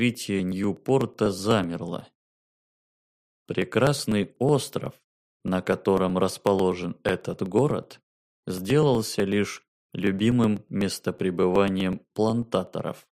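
From 0.15 s to 13.04 s there are periodic USB or driver dropouts. Every 0.124 s, about eight times a second, roughly a millisecond of audio is skipped. A stalled bus or driver causes each loss. They sound like steady ticks whenever signal plays.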